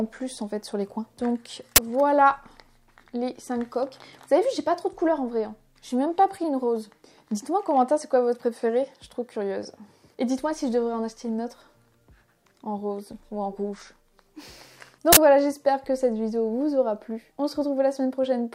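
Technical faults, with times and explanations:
1.76–1.78 s and 15.13–15.17 s, uninitialised buffer: two short, loud bursts of digital noise, about 21 ms and then about 43 ms, which fits one 1024-sample block and one 2048-sample block being played before any audio was written into them, so leftover memory came out as samples. Unlike a dropout, which leaves silence, or clipping, which flattens real peaks, each burst is loud noise unrelated to the surrounding sound, filling exactly one block.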